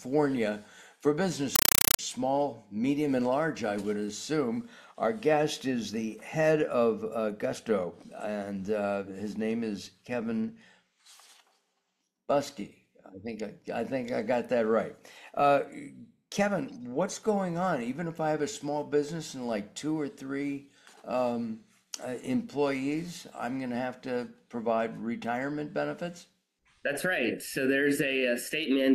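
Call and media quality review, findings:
Compressed stream played as audio, 1.56–1.99 s: loud chattering static replaces the sound. Probable component: S/PDIF or HDMI output passing AC-3 undecoded, consistent with a 256 kbps stream. Waveform shows 5.33 ms noise bursts, then flat zero padding, repeating at 31.25 Hz. Spectrogram shows matching broadband vertical stripes.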